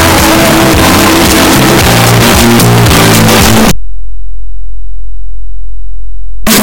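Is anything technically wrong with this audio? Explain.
Yes, one fault runs through the whole clip: signed and unsigned mixed up. The audio is very loud, harsh distortion, and quiet passages are as loud as everything else. The likely cause is 8-bit samples read with the wrong sign convention, which flips the top bit so that each zero crossing becomes a full-range jump. The waveform looks like a near-solid block, and the spectrogram shows dense broadband energy from bottom to top.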